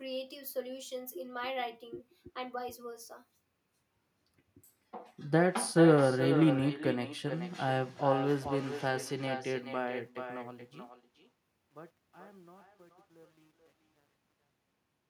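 From the start, there's echo with no canceller. The far end's loudspeaker feeds its mic, so every phrase returns roughly 400 ms later, about 10 dB down and thinner.

From 9.52 s the fade-out picks up truncation distortion. The level steps coarsely, which fits a 10-bit stage with no dither, and it turns gritty from 11.18 s to the end.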